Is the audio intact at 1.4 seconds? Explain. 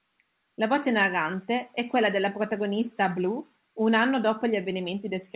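Yes, the audio at 1.4 seconds is intact, with only the ordinary narrowband character of the call path, whose sound stops at about 4 kHz, and no fault there.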